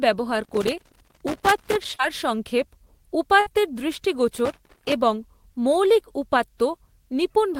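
From 0.44 to 1.85 s the speech is broken up by loose connector crackle: a worn or dirty contact keeps making and breaking, chopping the signal into an irregular, scratchy burst. The randomness of the bursts is what separates it from steady digital clicking. It comes back from 4.45 to 4.92 s, ending just before "এবং মৌলিক".

At 1.95 to 2.01 s there is a short concealed packet loss. About 40 ms of audio never reached the decoder in time, and the receiver filled 34 ms of the gap by extending the preceding sound before blending back. The result is a brief smear or wobble, not a crackle or a dropout.

From 3.41 to 3.48 s a burst of packet loss removes about 60 ms. The decoder covered 53 ms by continuing the last sound and fading it, which gives a short held buzz or fading hiss. The speech then resumes slightly further on, and that skipped-ahead continuation sets it apart from the smaller, seamless smear.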